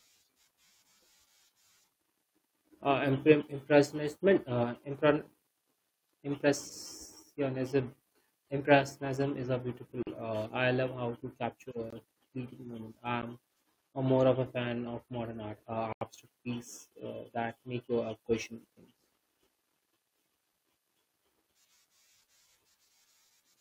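Blocks of digital silence, pointing to an output buffer that went unfilled in time, interrupt this speech at 10.03–10.07 s (43 ms), 11.90–11.93 s (21 ms), 13.22 s (12 ms) and 15.93–16.01 s (85 ms), the first, second and fourth of which are 2048-, 1024- and 4096-sample blocks. The cuts are abrupt, and the longer gaps sound like holes.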